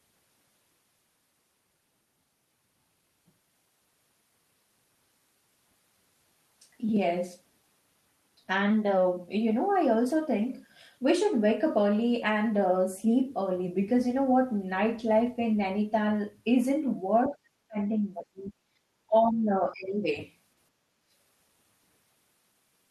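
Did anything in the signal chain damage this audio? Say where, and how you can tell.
Yes, and the damage happens at the call-processing stage. Between 17.29 and 20.07 s the speech repeatedly sinks and breaks up, at 17.29 to 17.79, 18.18 to 18.54, 18.74 to 18.86 and 19.07 to 20.07 s. The deepest dips reach something like 20 to 30 dB. This is speech suppressed in double talk, likely caused by both ends talking at once: the echo canceller couldn't tell this talker from its own loudspeaker echo and attenuated everything.

Just after that, from 20.95 to 21.11 s, the room sound behind the speech drops by about 13 dB for a fraction of a second and then comes back. That is background gated by the echo canceller. While far-end audio was playing through the loudspeaker, the canceller clamped the microphone path hard, taking the ambient noise down with it, and released it once it judged the echo had passed.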